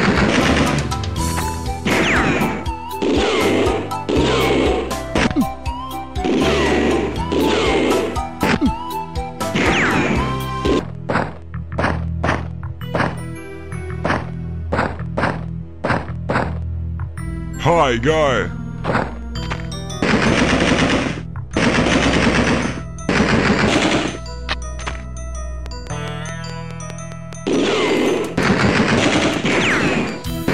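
From 25.66 s to 30.51 s, a train of clicks ticks over the sound. The pulses are alike and evenly spaced, 4.75 per second, about twenty in all. They peak around 10 dB above the audio. Interference from nearby equipment is the likely cause.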